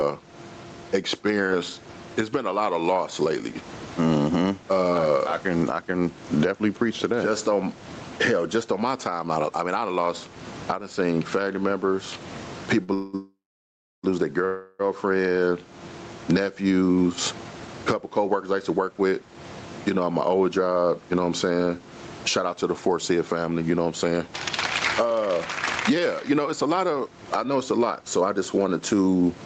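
Throughout the speech, the input gain is likely set far too high, so a fast limiter pulls the level down on every loud syllable by around 20 dB, leaving the speech squashed and pumping.

At 12.83 s a packet arrives late and the jitter buffer runs empty. This short stall from a late packet stretches the last sound for about 44 ms, until 12.90 s, so the audio hangs briefly with a slight buzz or dip before resuming where it left off.

Packets are then likely held up in transit, and the receiver runs dry three more times. These are call audio freezes, and the sound resumes intact afterwards. The first lasts from 12.94 to 13.15 s, where the last sound is extended as a fading buzz or hiss for about 0.2 s. The second runs from 13.15 to 14.05 s, where the fill fades out and about 0.68 s of it is silence. The third, from 14.45 to 14.81 s, is another held buzz or hiss of about 0.34 s. Together these insert well over a second of delay.

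Once the delayed audio arrives in a burst, the jitter buffer holds too much. It trims short pitch-period pieces repeatedly to catch up, which is a jitter buffer speed-up. From 16.82 to 19.35 s the speech plays at 112% speed, dropping about 0.3 s. From 25.03 s to the end it plays at 109%, dropping about 0.4 s. In both stretches the pitch stays the same but the delivery sounds hurried.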